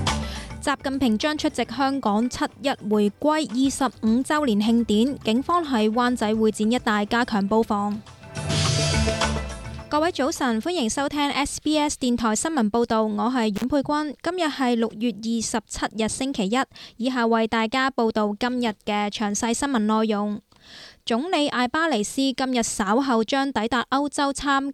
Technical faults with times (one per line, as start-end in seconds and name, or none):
13.56-13.64 intermittent contact